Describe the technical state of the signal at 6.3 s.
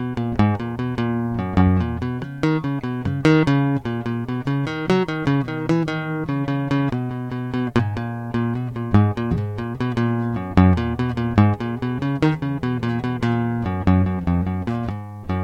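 At 6.3 s the music plays through cleanly, with no audible technical fault in the signal.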